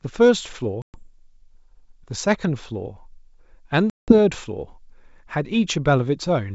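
At 0.82 s and again at 3.90 s the speech drops into hard-edged silence, the signature of packet loss on an ADPCM call: 120 ms lost in the first gap, running to 0.99 s, and 180 ms in the second, to 4.13 s, which fits a handful of packets and then roughly ten. With the stream missing, the decoder's adaptive predictor and step size drift from the sender's, so speech resumes with brief distortion before settling. The surrounding wideband sound is consistent with G.722 at its full rate.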